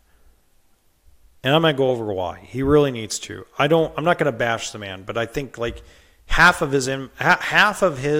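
No technical faults can be heard in the speech at any point.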